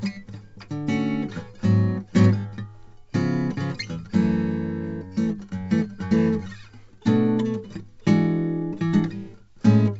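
There are no technical faults to describe in this music, which comes through a G.722 call path with nothing above about 8 kHz.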